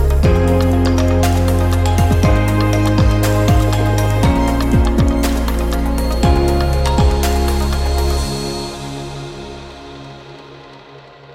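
A feedback whistle sits behind the sound from 5.87 s to 8.81 s: a thin, steady tone at 4.3 kHz, roughly 20 dB below the main signal and swelling and fading slowly in level. The likely cause is a loudspeaker-to-microphone loop held right at the edge of feedback, so one frequency keeps ringing without growing. On a spectrogram it shows as a narrow horizontal line at 4.3 kHz spanning those three seconds. In the waveform it is barely visible beneath the louder material.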